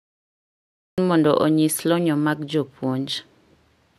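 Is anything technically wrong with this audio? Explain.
Yes, the clip has a cut-off start. Capture began late, so the first 0.98 s is digital silence, and at 0.98 s the speech enters mid-sound at "mondo onyisi lony mag" with no natural attack or fade-in, giving an abrupt, clipped-on opening.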